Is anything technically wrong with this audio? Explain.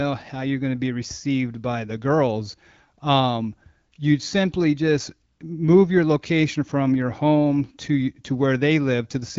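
No, nothing is technically wrong with this audio.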